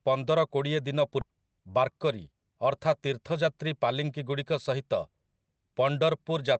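In this speech clip, a stretch of audio was dropped, either lost on the way or discarded when the call's jitter buffer overflowed, while later audio was already waiting, so playback had to catch up to later audio. The result is a skip ahead at 1.21 to 1.23 s. Roughly 0.4 s of speech is missing, and the material on either side is spliced together with no gap filled in, so the sentence lurches forward abruptly. The call codec's usual coding noise and its 8 kHz upper band limit are audible throughout.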